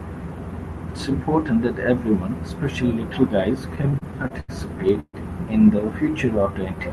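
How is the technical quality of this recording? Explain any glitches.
The recording has three timing glitches in the last few seconds, all on a call path using a speech codec whose band tops out around 12 kHz.

From 3.75 to 4.50 s there are repeated stalls (stutter): packets arrived late, the jitter buffer kept emptying, and ten brief continuations, the longest 83 ms, make the speech drag and stutter.

From 5.00 to 5.15 s a call audio freeze, likely from packets held up in transit, stretches the last sound for about 135 ms, including 50 ms of silence, before the speech resumes intact.

From 6.26 to 6.76 s a jitter buffer slow-down repeats pitch periods to rebuild its reserve, adding 41 ms, so the speech plays at 94% speed with the pitch unchanged.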